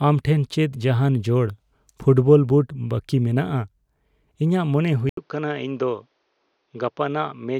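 Speech clip where, just after "ᱤᱧᱟᱜ ᱢᱚᱱᱮ", an 80 ms gap at 5.09 s leads into duller, quieter sound, nothing above 6.5 kHz, noise about 45 dB down; likely the input switched to a poorer device, visible as a spectrogram ceiling and smaller waveform.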